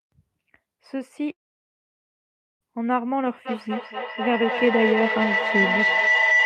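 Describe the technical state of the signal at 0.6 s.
At 0.6 s the speech signal is intact, with no audible technical fault at that moment.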